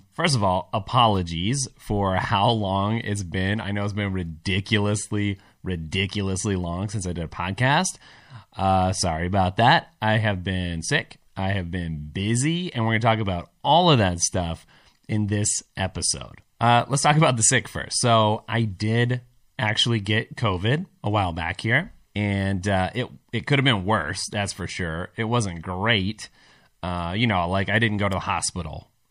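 Throughout the speech, the sound is watery and swirly, with chirpy, metallic s sounds and smeared consonant onsets, most likely from MP3 compression at a rate that fits a 64 kbps encode. Starved of bits, the encoder drops weak frequency components, which flicker frame to frame. A spectrogram would show a hard treble ceiling and speckled, patchy upper bands.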